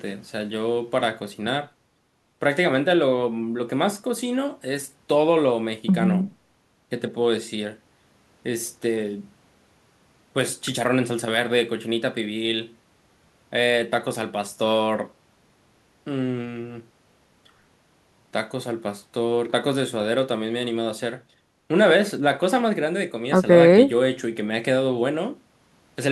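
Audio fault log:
Nothing to log here: I listened all the way through this speech recording and didn't catch anything worth a line.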